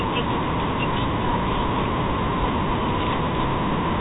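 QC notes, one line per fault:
Nothing to flag here, just ordinary G.711 telephone coding doing its job, with the sound topping out around 3.8 kHz as a phone line would.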